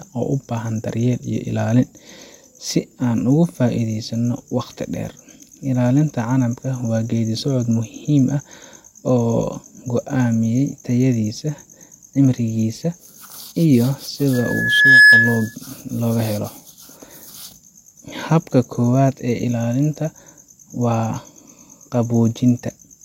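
From 14.33 to 15.55 s, a microphone picks up its own loudspeaker and the loop gain passes unity at 1.7 kHz, causing loudspeaker feedback squeal: a single piercing tone swells in under a second to about 10 dB above the speech before it stops.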